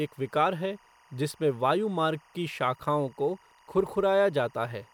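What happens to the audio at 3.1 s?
A faint, steady chirping warble sits behind the speech at 3.1 s, as it does from start to finish. That is timecode bleed. Linear timecode on an adjacent track or cable has leaked into the audio path. The code is a square wave that flips between two pitches near 1 and 2 kHz, and its pattern repeats at 23.976 frames per second. It rides roughly 35 dB beneath the speech.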